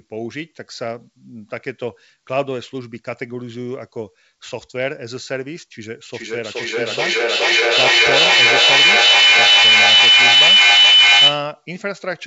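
Feedback howl, 6.07 to 11.6 s: a microphone-loudspeaker loop gains on every trip, swelling into a tone near 3 kHz whose repeats come roughly every 0.4 s, peaking about 13 dB over the speech.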